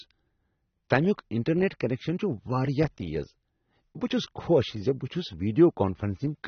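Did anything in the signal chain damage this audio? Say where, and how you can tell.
Yes, at the codec stage. Throughout the speech nothing survives above 6.3 kHz, and sibilants sound dull, smeared and fizzy. This is likely AAC compression at a low bitrate, near 24 kbps, quantising coarsely. A spectrogram shows a flat ceiling at 6.3 kHz.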